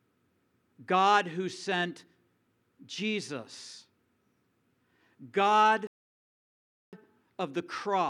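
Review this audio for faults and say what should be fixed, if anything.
A rebuffering stall runs from 5.87 to 6.93 s: the player exhausted its downloaded audio, fell silent for about 1.06 s while waiting for more data, then picked up the speech exactly where it stopped, so nothing is missing but the clip runs longer. To prevent it, keep a deeper playback buffer and adapt to a lower bitrate when delivery slows.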